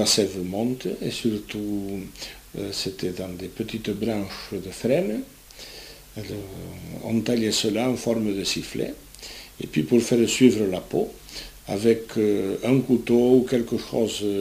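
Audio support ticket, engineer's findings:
Constant, even hiss across the whole clip, start to finish. No distortion or grittiness riding on the signal. Low bit depth with dither. Error sits as steady white noise, roughly 25 dB below the signal. Points to an 8-bit stage. Dither added before rounding turns quantisation error into flat noise instead of harmonic distortion. Check the converter or export stage for word-length reduction.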